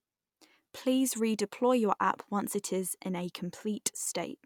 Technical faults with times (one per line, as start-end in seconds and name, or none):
none